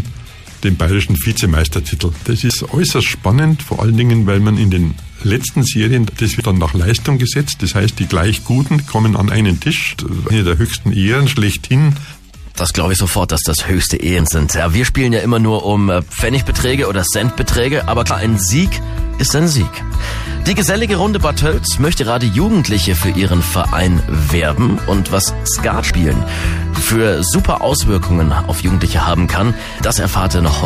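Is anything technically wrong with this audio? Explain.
Yes. At 2.50, 10.30, 14.20 and 25.90 s, roughly a tenth of a second of audio drops out with a hard splice, likely audio missing between chunks in four-second processing blocks.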